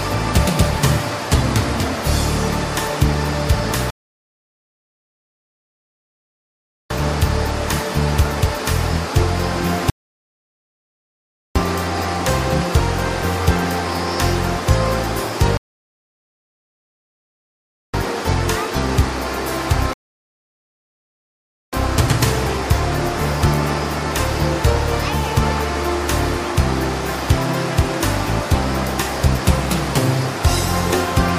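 At 3.90 s the audio halts in a rebuffering stall, falling silent until 6.90 s, about 3.0 s, because playback ran out of downloaded data. Further stalls follow at 9.90–11.56 s (1.66 s), 15.57–17.94 s (2.36 s) and 19.93–21.73 s (1.79 s). Unlike a dropout, each gap adds time without removing any: the sound picks up exactly where it stopped, with nothing skipped.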